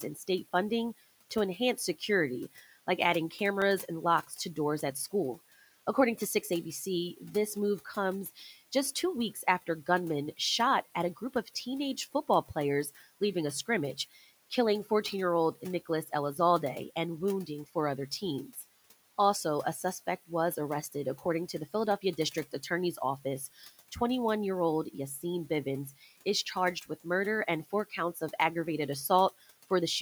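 Speech recording in which the noise suppressor repeatedly mistakes parts of the speech for noise. Over the background room noise, which sits about 21 dB below the speech, it pulls syllables down with the background, leaving them faint or swallowed. The speech cut by the noise suppressor occurs at 0.0–0.29 s, 1.57–3.33 s after "funding to", 4.27–5.12 s, 6.18–16.38 s (about a second in total), 17.47–18.64 s, 19.83–23.96 s ending just before "year old", and 24.93–29.71 s following "year old", with drops of about 9 to 17 dB. At 3.62 s a block of digital silence lasting 0.67 ms, consistent with a 32-sample block of zeros, produces a single tick where the output cuts to zero and back without any fade.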